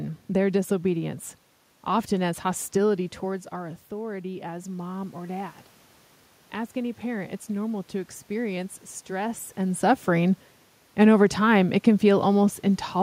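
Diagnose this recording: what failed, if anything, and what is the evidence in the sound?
The automatic gain rising is in the call processing stage. Around 3 s the talker backs off the mic and the input drops by about 11 dB. From 3.25 to 5.6 s the AGC slowly pushes its gain up by about 4 dB. You can hear the voice and the room noise swell together over those two-odd seconds, which is the giveaway. A real change in distance wouldn't lift the background along with the voice like that.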